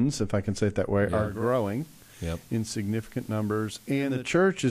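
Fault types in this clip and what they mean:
Digital radio blending to analogue: the receiver lost its digital stream near 1.04 s and cross-faded over about half a second to the FM broadcast of the same station, staying there until about 4.39 s. The speech drops by about 4 dB and picks up a hiss roughly 25 dB beneath it. On a spectrogram everything above about 15 kHz goes empty and a steady noise floor fills the pauses. The waveform envelope steps down through the fade.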